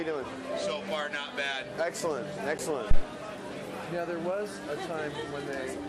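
At 2.91 to 3.00 s, a phantom power thump: a supply switched on or off on the live input sends a step through the coupling capacitors, giving a deep thud peaking near about -9 dBFS that decays in 21 ms. It appears as a lopsided low-frequency waveform spike and a dark band at the bottom of the spectrogram.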